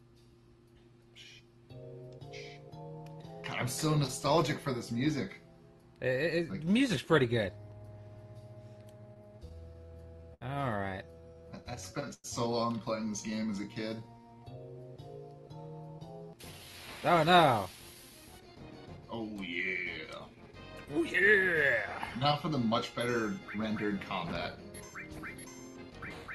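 From 9.01 to 10.43 s there are repeated stalls (stutter). Packets arrived late, and the jitter buffer ran dry nine times. Each gap was bridged by continuing the last sound, the longest for 70 ms. About 164 ms was filled in. Nothing is lost, but the sound drags and catches.

From 11.11 to 12.06 s a jitter buffer slow-down follows. The receiver repeated single pitch periods to rebuild its reserve. Playback runs at 92% speed, with 86 ms added. Pitch stays the same, but sounds are drawn out.

At 12.14 s a short call audio freeze begins, lasting to 12.26 s. The last sound is stretched into a brief fading buzz, ending in 30 ms of silence. The likely cause is packets held up in transit, which left the buffer empty. The delay grows by 103 ms, and the audio then resumes where it stopped.

From 13.30 to 14.50 s a second slow-down plays at 91% speed, adding 115 ms.

From 16.31 to 18.98 s comes a jitter buffer speed-up. 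The buffer held too much audio, so short pitch-period pieces were cut out, about a third of a second in all. Playback runs at 111% speed, same pitch, sounding hurried.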